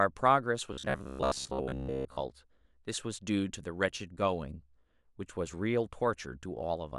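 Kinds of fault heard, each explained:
Robotic sound from repeated short buffers: From about 0.73 to 2.23 s the speech collapses into a stiff, metallic buzz pitched near 66.7 Hz, loosely tracking the words. That buzz works out to a 15 ms period, so the likely cause is fresh audio arriving too slowly and a roughly 15 ms chunk being replayed to fill the gaps, with most of the real signal in that stretch skipped.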